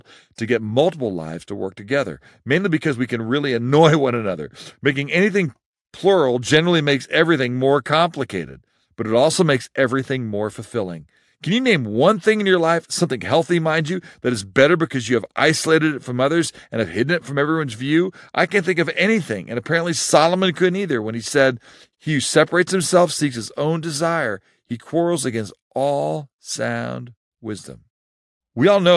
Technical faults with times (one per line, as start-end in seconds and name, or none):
none